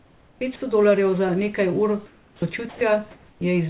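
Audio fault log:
0.00–0.41 s, 2.06–2.42 s (just after "dolarjev za nekaj ur") and 3.11–3.41 s: comfort noise in place of the background. Pauses become steady, featureless hiss, about 4 dB and 6 dB quieter, then about 1 dB louder. This is likely discontinuous transmission with receiver-generated noise.
0.38–0.41 s: onset clipped by the voice detector. The first 30 ms are missing, so the sound starts abruptly. This is likely because the detector was slow to resume sending.
2.69–2.81 s: sound dropped by the voice detector. For 120 ms, sound gives way to steady noise. This is likely because the detector mistook quiet sound for background.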